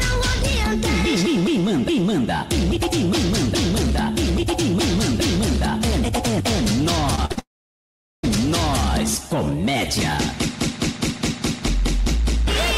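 Short concealed packet loss at 7.15 to 7.19 s: about 20 ms of audio arrived too late, and the receiver continued the preceding sound to bridge it, leaving a brief smear.

Two bursts of packet loss follow at 7.25 to 7.32 s and 7.32 to 7.39 s. The receiver filled 47 ms and 52 ms with fading continuation of the last sound, while 40 ms and 60 ms of real audio went missing.

A long network dropout, the likely cause, runs from 7.39 to 8.25 s. A fading continuation gives way to about 770 ms of silence, and the sound resumes with roughly 840 ms lost.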